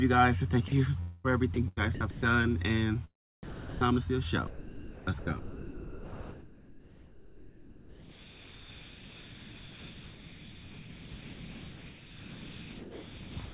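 At 0.68 s a brief stretch of about 40 ms gives way to steady synthetic noise. This is sound dropped by the voice detector: the sender likely judged that moment to be background, stopped transmitting, and the receiver filled the gap with comfort noise. The same thing recurs from 3.43 to 3.81 s, where roughly 370 ms of real sound is lost behind a flat noise floor until the detector reopens.

Between 1.00 and 1.26 s there is a long network dropout, most likely packets not arriving for about 240 ms. The receiver stretches the last received sound into a fading buzz that covers the whole gap without falling to silence. The audio then resumes further on, and the missing quarter-second is simply gone.

From 1.54 to 2.23 s the sound is chopped by the voice detector. Transmission likely switched on and off several times, and about 285 ms of sound were swapped for comfort noise. The same behaviour returns at 4.47 s and runs to the end at 13.53 s. 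Here about 8.7 s of that 9-second stretch is comfort noise, leaving only fragments of genuine sound. Throughout, the band stops at 4 kHz, which fits G.711 A-law at 64 kbps.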